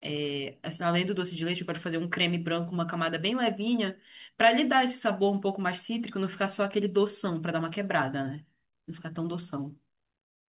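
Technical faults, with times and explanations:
Nothing stood out on listening to this speech, which comes through a call line that carries nothing above 4 kHz.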